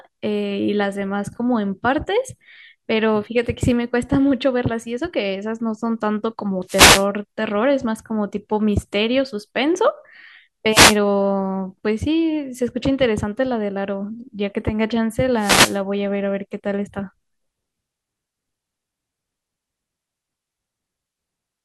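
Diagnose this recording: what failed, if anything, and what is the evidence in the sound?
Wireless microphone noise hits on the analogue radio link at 6.67–7.06 s, 10.70–10.97 s and 15.37–15.79 s. Signal fades let receiver hiss swell, showing as broadband spectrogram smears.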